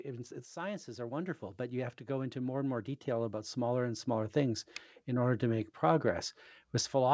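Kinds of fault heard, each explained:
Automatic gain rising: the automatic gain control judged the incoming speech too quiet and kept stepping its gain up, so the voice and the background noise floor swell together rather than the voice alone getting louder. Here the climb is slow and continuous, running from about 0.05 s to 6.11 s and adding roughly 11 dB in total. The rise is heard through a call codec band-limited at 8 kHz, which fits G.722.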